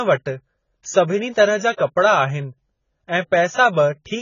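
Throughout, the speech sounds dull and warbly with nothing above 7 kHz, likely from heavy AAC compression at about 16 kbps; a spectrogram shows a hard ceiling and patchy holes. At 1.76 s, pre-echo puts a short hiss about 19 ms ahead of an attack, visible as a smear of noise before the waveform's onset.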